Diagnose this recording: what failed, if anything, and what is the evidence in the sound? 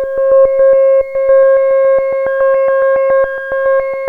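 Nothing failed: no stage in the chain, from analogue wiring through converter, buffer, processing, network, storage and playback, leaves any audible mark on this recording.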